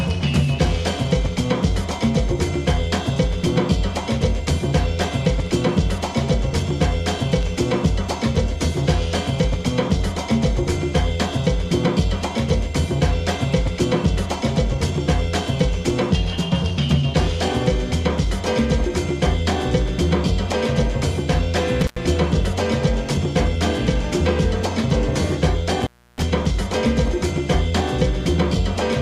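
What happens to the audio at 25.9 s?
Right around there you've got an intermittent contact, running from 25.82 to 26.23 s. A loose plug or cable briefly breaks the connection, so the sound drops out for roughly 314 ms, with crackle at both edges and faint hiss while the line's open.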